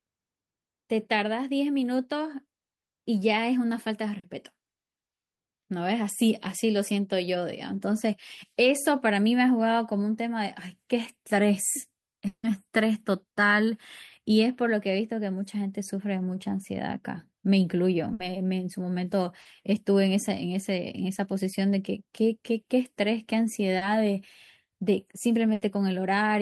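At 4.19 s, 19.41 s and 23.77 s there are three instances of short concealed packet loss, each about 40 ms. Each time, a few hundredths of a second of speech arrived too late for the decoder, and the receiver bridged the hole by extending the preceding sound, carrying its pitch through voiced segments or substituting shaped noise otherwise, before crossfading back. Each event is audible as a brief smear or wobble, with that fragment of speech lost.

From 12.27 s to 12.45 s the speech cuts out. The sound just before the break is stretched into a fading buzz or hiss for roughly 0.16 s, the last 80 ms or so of it left as silence, before the audio resumes further along, with the intervening material gone. This is likely a long network dropout, where the stream stopped arriving and concealment ran out before delivery recovered.

Two bursts of packet loss occur, at 18.13 to 18.21 s (about 60 ms missing) and 25.53 to 25.63 s (about 80 ms missing). 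In each, consecutive packets failed to arrive in time. The receiver held the last sound and attenuated it as the gap lengthened, producing a short sustained buzz or decaying hiss, then jumped ahead, so the speech resumes with a piece cut out.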